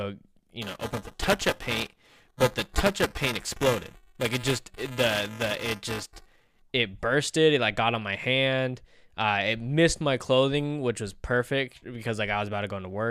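From 0.62 s to 6.62 s the speech carries buffer tearing: writer and reader of the ring buffer cross each period, so about a tenth of each block repeats audio a few milliseconds old. The result is a rattling 375 Hz buzz, fitting a 128-sample buffer, ending just before "it bursted".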